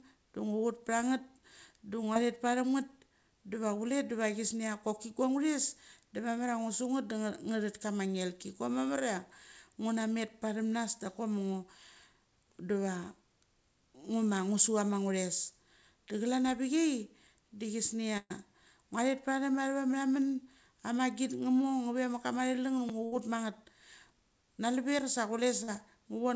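Speech over a call link whose band stops at 8 kHz, which fits a wideband G.722 path, with brief smears at 2.14 s (about 20 ms) and from 25.64 to 25.70 s (about 40 ms). These are short concealed packet loss: missing audio was patched by extending the preceding sound, then blended back. Quick buzzy stutters at 16.08 s and 22.89 s come from a repeated buffer. A roughly 5.8 ms chunk, which fits a 256-sample buffer, replays three and two extra times, respectively, with hard joins, when fresh audio arrived late. Longer held, fading dropouts from 18.17 to 18.32 s, including about 40 ms of silence, and from 23.06 to 23.14 s are bursts of packet loss. About 120 ms and 60 ms of audio were lost and covered by stretched, decaying sound before playback resumed further on.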